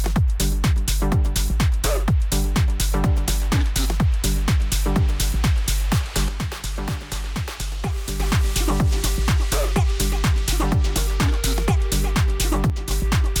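The audio takes two sudden level drops of about 6 dB: one from 6.29 to 8.20 s, and a shorter one from 12.70 to 12.91 s. Each time the level falls abruptly and jumps straight back at the end, with no fade either way. The likely cause is one channel dropping out, so the mono sum loses half of whatever both sides shared, and anything carried only on the lost side vanishes for those stretches.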